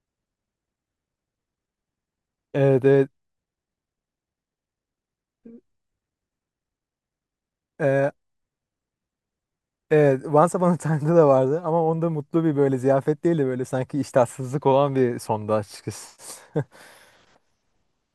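Speech, with nothing technically wrong with it at any point.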